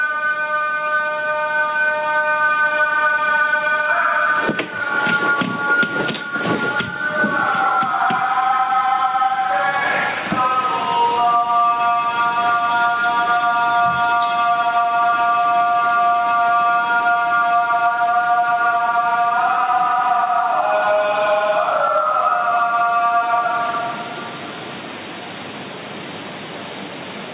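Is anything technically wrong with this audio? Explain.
Yes. Gain pumping runs through the whole recording of sounds. The gain swings by roughly 10 dB under each loud sound. The likely cause is excessive gain with a fast limiter clamping down. Through the call path, everything above 4 kHz is absent, which fits G.711 mu-law at 64 kbps.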